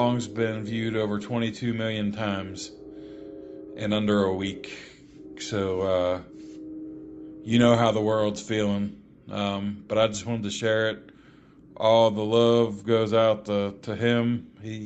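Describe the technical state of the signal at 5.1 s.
At 5.1 s the audio is intact, with no dropout, glitch or distortion, only the band limit near 8 kHz and the usual coding texture that a normal call path leaves on the sound.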